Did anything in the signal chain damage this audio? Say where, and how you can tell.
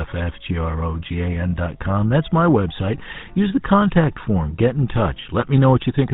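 Yes. The GSM full-rate codec damage runs throughout the clip at the codec stage. The speech has a buzzy, gravelly roughness, and nothing survives above 4 kHz. That band limit and texture fit a 13 kbps full-rate coder. It models the vocal tract as a filter and drives it with a regular pulse train built from only every third excitation sample, so the fine structure of the voice is replaced by a coarse, rasping approximation.

GSM bit errors hit from 5.40 to 5.44 s, a network-stage fault. For about 40 ms the speech breaks into a brief squawk and gargle, with the spectrum bending and the level jumping abruptly. The short duration points to a couple of corrupted frames. Flipped bits reached the decoder and scrambled the filter, pitch or gain parameters, so it rebuilt those frames with the wrong tonal shape and loudness before recovering.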